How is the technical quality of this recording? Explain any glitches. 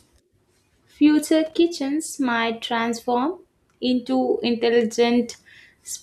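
The recording has one audible glitch: a short burst of loose connector crackle from 1.46 to 1.54 s. A worn or dirty contact was briefly making and breaking, chopping the speech, heard as about 80 ms of irregular scratching. A waveform shows ragged dropouts and sharp spikes there; a spectrogram shows scattered broadband vertical streaks.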